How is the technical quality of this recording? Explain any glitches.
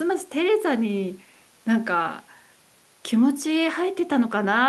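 The technical quality of this speech recording is good, with no glitches to explain.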